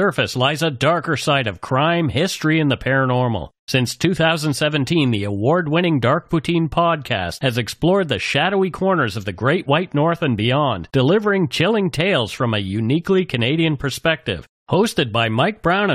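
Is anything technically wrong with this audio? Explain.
No, the speech signal shows no technical faults anywhere in the recording.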